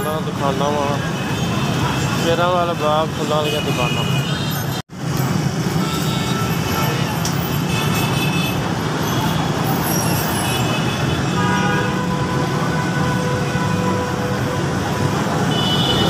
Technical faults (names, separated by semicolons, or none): train of clicks